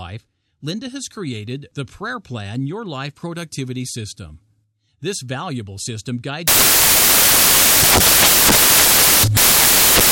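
From 6.48 s, right after "valuable system", to the end at 10.11 s, the speech turns into loud, harsh broadband noise: samples built from the wrong bytes, with the bytes misordered or misaligned so the fast-changing low bits dominate. The spectrogram shows broadband energy.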